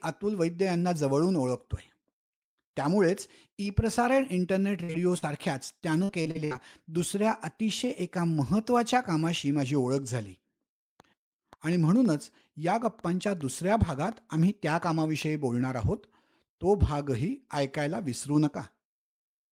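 At 4.83 to 4.91 s a burst of packet loss cuts into the speech: about 60 ms never arrived, and the receiver stretched the last sound into a held, fading tail before jumping ahead. On a spectrogram the spectrum freezes and dims; the waveform shrinks away.

Two short concealed packet losses follow, at 4.93 to 4.96 s and 5.18 to 5.24 s, of roughly 20 and 40 ms each. Each is a brief smear or wobble where the decoder guessed the missing audio. They appear as short smooth patches where the spectral detail briefly goes uniform.

From 5.80 to 6.60 s, repeated packet loss gives the speech a choppy, robotic sound. Six gaps, the longest 59 ms, are patched in quick succession, so about a quarter of that stretch is synthesized. The spectrogram shows a row of blurred, stuttering slices along the harmonics.

Between 11.0 and 15.2 s a train of clicks ticks over the sound at about 4.7 per second, irregularly spaced, around twenty in all, peaking roughly as loud as the speech. 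The likely cause is interference or a faulty connection or power supply. They show as thin vertical lines across all frequencies and sharp waveform spikes.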